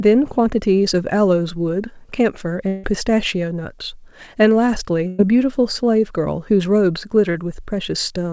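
From 2.68 to 2.86 s the sound is carried on as a fading buzz or hiss for about 160 ms and then resumes further along, never dropping to silence. This is likely a long network dropout, and it is longer than the later loss burst.

At 5.07 to 5.22 s, a burst of packet loss removes about 120 ms. The last sound is held and dimmed for roughly 110 ms before the audio jumps ahead. That is shorter than the first gap but clearly longer than a brief smear.

At 7.31 to 7.37 s, short concealed packet loss covers a 40 ms hole with a continuation of the preceding sound and blends straight back. It is heard as a quick wobble, all within the call path's band that ends at 8 kHz.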